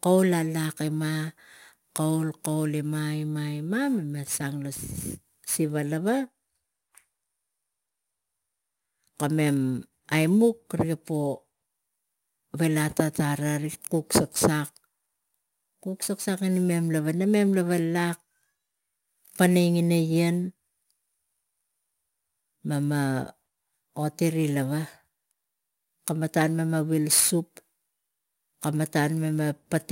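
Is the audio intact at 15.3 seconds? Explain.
No. At 15.3 seconds the speech carries a gritty, inharmonic fizz that rides on louder and brighter sounds, and it runs through the entire clip rather than just this moment. This is crude rate conversion: samples were repeated by nearest-neighbour picking instead of filtered resampling, which fits a change from 44.1 kHz to 48 kHz. The repeating timing error creates tones unrelated to the speech, sitting about 20 dB below it.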